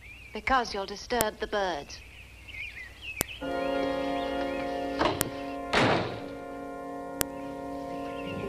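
At 1.21 s a sharp, loud click snaps through the audio. It returns at 3.21, 5.21 and 7.21 s, exactly every 2 seconds. This is a file header played as audio. The stream appears to be built from 2-second pieces joined without stripping each piece's header. Those header bytes are read as sample values, so each join throws a brief, hard spike. The click lands on the same schedule no matter what the sound is doing.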